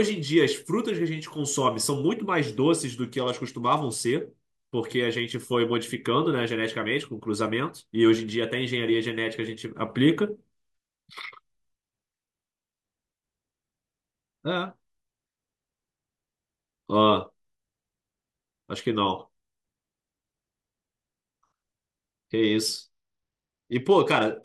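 A Bluetooth SBC bit pool drop starts at 3.17 s and lasts until 4.13 s, and another runs from 22.43 s to the end of the speech. Both times the link starves the encoder, which fits a bit pool cut from 28 to 13, about 102 kbps. The top sub-bands lose their bits, so the treble dulls and a gritty, coarse noise rises.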